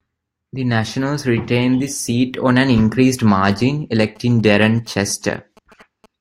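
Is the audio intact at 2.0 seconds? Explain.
Yes, at 2.0 seconds the speech plays through cleanly, with no dropout, click, distortion or other fault to be heard at that moment.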